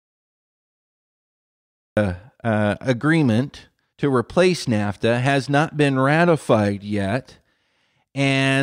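A speech recording with a cut-off start: the first 1.97 s is pure digital silence, and at 1.97 s the talker enters already mid-sound, with no rising attack or fade-in. That points to capture or streaming beginning late, after the utterance was under way. Unlike a noise gate or a slow fade, nothing ramps up, and unlike a dropout, the silence is at the very beginning rather than breaking into running audio.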